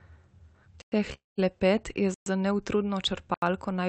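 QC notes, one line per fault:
0.82–0.92 s, 2.14–2.26 s, 3.34–3.42 s, block of digital silence: the output buffer was probably not filled in time, so runs of samples were replaced by zeros. The sound drops straight to dead silence and returns with no fade, leaving a short hole of about 100 ms, 120 ms (just before "za neutrudno") and 80 ms (just after "je za neutrudno").
1.14–1.39 s, call audio freeze: the jitter buffer likely ran empty while packets were held up, so the receiver stretched the last sound into a fading buzz that sinks to silence for about 160 ms. When delivery resumes the sound carries on where it stopped, nothing lost. The 238 ms pause is simply inserted, pushing everything after it later.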